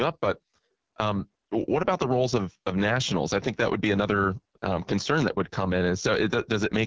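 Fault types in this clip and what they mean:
AMR wideband (HD Voice) codec: heavily damaged, raspy, rough speech throughout, which fits the lowest 6.6 kbit/s mode; a spectrogram shows smeared harmonics below 6.4 kHz, a shaped noise-filled band from 6.4 to 7 kHz, and nothing above 8 kHz.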